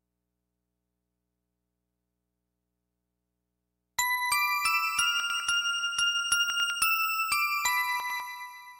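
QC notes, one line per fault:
5.2–5.4 s, 6.5–6.7 s and 8.0–8.2 s, chunks out of order: in each spot a 100 ms chunk shows up one chunk late and swaps places with its neighbour. Nothing goes missing, but the jumbled order and the three hard joins give a brief garbled stumble.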